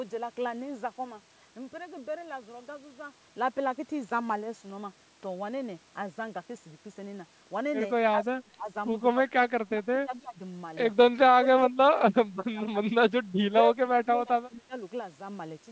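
Between 8.11–8.69 s, 9.13–9.32 s, 9.58–10.4 s, 11.22–13.11 s and 13.48–14.75 s the speech sinks and breaks up, dropping by roughly 20 to 30 dB at worst. This is likely speech suppressed in double talk: the echo canceller confused the talker with far-end echo and attenuated both.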